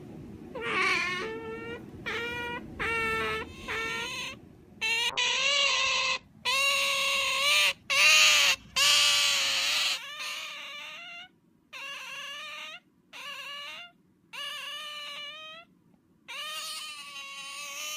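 From 5.11 to 6.31 s the audio turns rough and muffled, with the top end cut off at around 8 kHz instead of 20 kHz. This is a call bitrate drop: the encoder was starved of bits for about a second, which fits a fall from roughly 48 to 10 kbps.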